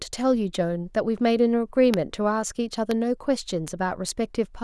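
Bit error spikes at 1.94 s, 2.91 s and 3.68 s in this speech: a flipped bit briefly throws the sample value by a power of two, reaching about -6 dBFS at the first and about -12 dBFS at the others, heard as abrupt broadband ticks unrelated to the speech.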